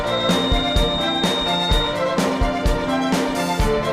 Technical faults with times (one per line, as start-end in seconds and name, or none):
0.00-2.00 feedback whistle